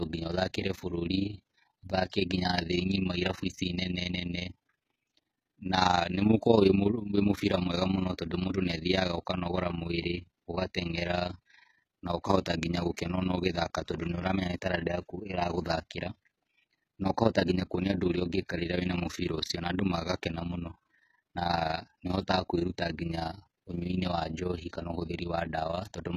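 From start to finish, the treble of the speech sounds rebuilt rather than captured: s sounds turn gritty and metallic while the top end stays bright. That points to likely HE-AAC compression at a low bitrate, around 20 kbps, where copied-up bands replace the original highs. Plain low-pass coding would sound dull instead.

Also throughout, the level pulses by about 11 dB roughly 30 times a second, an overlap-add ripple from frames rejoined with uneven gain. It is a rough flutter locked to a steady frame rate, unlike the irregular warble of packet loss.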